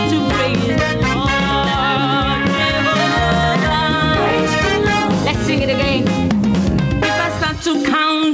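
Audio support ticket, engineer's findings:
Gain pumping, throughout the clip. Gain pulled down as each loud sound hits, with swings of around 5 dB. Likely cause: input gain set way too hot and a fast limiter clamping down on each peak. Dynamics end up squashed. FYI, nothing above 8 kHz, which points to the call codec (G.722-style wideband) on the WebRTC path, not this fault.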